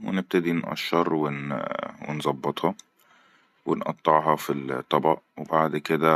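Speech recording, and nothing technically wrong turns up anywhere in it.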